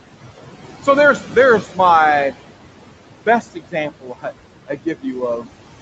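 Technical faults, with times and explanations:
Throughout: noise suppressor artifacts. The suppressor pulls the room noise down by about 17 dB between words, so the background pumps under the speech.
1.62–1.79 s, 3.26–3.76 s, 4.01–4.26 s and 4.68–5.05 s: speech cut by the noise suppressor. Soft speech gets mistaken for noise and ducked by about 14 to 18 dB, so it sounds swallowed.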